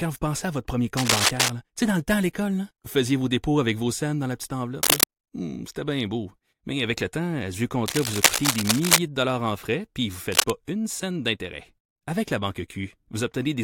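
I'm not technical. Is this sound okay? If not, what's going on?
No. A worn cable or connector was likely being moved, making its electrical contact flicker. That cable scratch noise appears as rough scratching bursts over the speech at 0.97–1.50, 4.83–5.05, 7.86–8.99 and 10.32–10.51 seconds, mostly louder than the speech itself.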